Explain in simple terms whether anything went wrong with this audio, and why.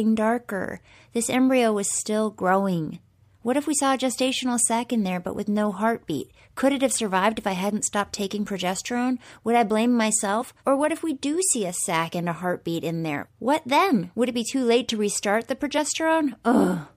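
Compressed frames were skipped twice: at 10.4 s after "I blame", and at 15.77–15.79 s after "late to restart the". Missing chunks, about 50 and 20 ms, cause short jumps ahead.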